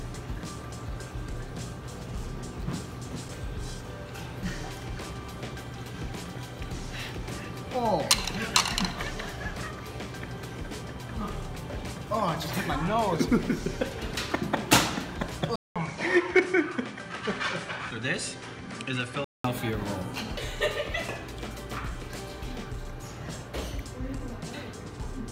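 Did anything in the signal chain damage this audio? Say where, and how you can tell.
Yes: likely an input switched to a poorer device, from 15.56 to 19.44 s. A 200 ms gap opens, then the spectrogram stops at 11.1 kHz and the waveform shrinks.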